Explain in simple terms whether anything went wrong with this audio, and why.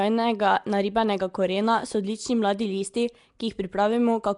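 Something did go wrong, and it lasts for the whole clip. The speech has a rough, hissy haze around it and a smeared, underwater quality. The damage is plainly audible. Nothing is heard above about 10.6 kHz. The likely cause is Nellymoser compression, the old Flash microphone codec. It squeezes sound into small blocks with very few bits. Weaker parts of the sound get no bits at all and are filled in with noise. That noise is the hiss you hear.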